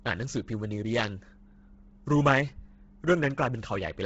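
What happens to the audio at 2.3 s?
The speech at 2.3 s carries the same damage heard throughout, likely from Bluetooth LC3 compression. Nothing sounds above 7.7 kHz. The codec strips upper detail and fills it with noise, so the voice turns breathy and grainy. The heavy damage suggests a low bitrate near 16 kbps.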